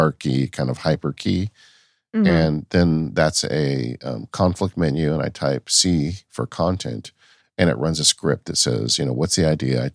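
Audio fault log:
No fault is heard anywhere in this speech recording. There is nothing to log for it.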